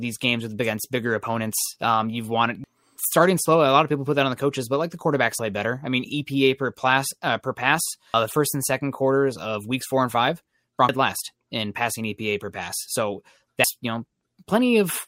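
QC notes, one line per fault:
2.64, 5.39, 10.89 and 13.64 s: audio missing between chunks. Each is an abrupt skip of about a third of a second of speech, joined with no gap. The regular spacing likely comes from the recorder dropping material each time it closes one 3-second chunk and opens the next.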